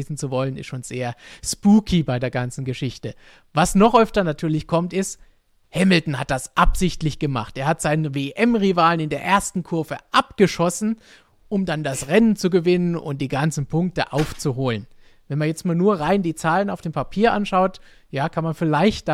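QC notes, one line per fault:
No faults heard in this clip.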